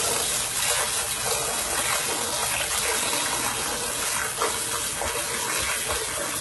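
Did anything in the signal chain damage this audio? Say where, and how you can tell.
Yes. Throughout the clip the top end sounds bright but synthetic, with gritty, metallic treble and nothing above about 11.8 kHz. This is likely HE-AAC compression at the codec stage, heavily damaged at a very low bitrate, consistent with roughly 16 kbps, where copied-up bands replace the real treble.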